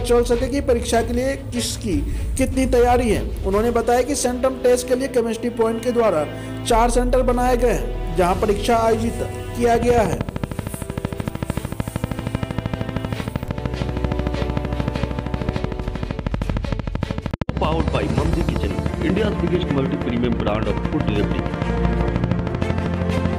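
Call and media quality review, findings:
Train of clicks, 9.75 s to 23.34 s: regular ticking at 13 per second, roughly 200 pulses, well above the signal; likely nearby equipment interference or a failing interface.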